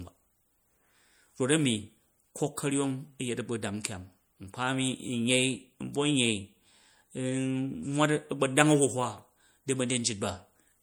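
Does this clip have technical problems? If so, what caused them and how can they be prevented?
Yes. Throughout the speech there is plainly audible watery, swirling distortion, likely from MP3 compression at a low bitrate, perhaps 64 kbps. A plain low-pass filter would sound dull but steady. Here the weak high components flicker on and off between frames, and s sounds turn metallic. To prevent it, use a higher bitrate or a lossless format.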